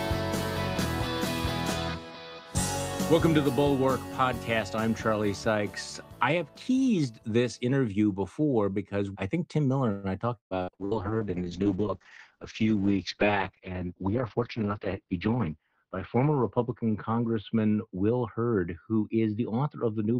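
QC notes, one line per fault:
9.91–10.94 s: repeated packet loss (robotic sound). Five dropouts follow one another in about a second, the longest around 121 ms. The receiver fills each hole by extending the last received sound, about 399 ms of patching in all, covering roughly 39% of the stretch, and about 300 ms of material is simply gone. Because the gaps come so close together, the repeated extensions give the sound a choppy, robotic texture with pieces missing.
10.75–20.20 s: call bitrate drop. From this point to the end the sound becomes coarse and muffled. The high end is cut off at 6 kHz, down from a full 20 kHz band, and the lowest-quality state lasts about 5.4 s. The dull, watery character points to the encoder being pushed from around 40 kbps down to about 7 kbps after the bandwidth estimate fell. At that rate Opus quantises coarsely and drops the upper frequencies to save bits.
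14.02–15.49 s: jitter buffer speed-up. During this span the sound runs about 6% fast but keeps its pitch, so it comes across as slightly hurried. The receiver's buffer had built up more audio than its target, so it shortened playback by repeatedly removing small segments one or a few pitch periods long. In total about a tenth of a second was trimmed, which is why the timing tightens without any pitch change.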